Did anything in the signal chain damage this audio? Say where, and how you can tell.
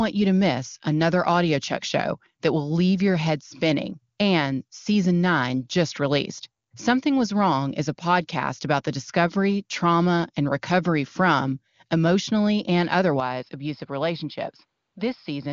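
Yes. The input likely switched to a poorer device at 13.2 s, right after "recovery from emotionally and". The band now stops at 5.3 kHz, below the wideband codec's 7.3 kHz, the level drops about 5 dB, and new noise appears.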